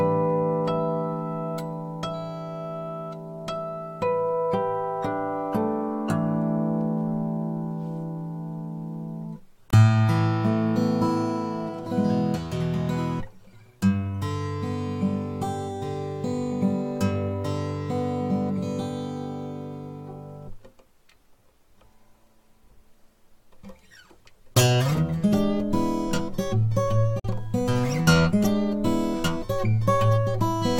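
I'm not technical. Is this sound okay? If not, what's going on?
No. The sound cuts out briefly at 9.70 s and 27.19 s, then resumes as if it kept playing. This is a Bluetooth dropout, likely from wireless audio packets arriving too late.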